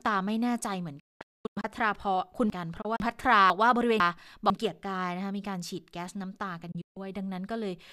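From 1.0 to 3.0 s the speech turns jumbled: a 500 ms chunk plays three chunks later than it should. This is chunks out of order. Nothing is missing, but the sequence is scrambled, leaving hard joins. At 2.81 s the sound breaks into several short silent holes, each entered through a quick 8 ms fade. This is a digital broadcast dropout: the receiver muted while frames failed, losing about 600 ms of audio spread over 816 ms, with the longest gap 240 ms. That pattern points to roughly two dozen frames of about 24 ms each. From 3.5 to 4.5 s there is another brief scramble, where one 500 ms chunk arrives a single chunk late. Between 6.71 and 6.97 s the dropout returns, cutting 168 ms across 240 ms, with the longest hole 144 ms.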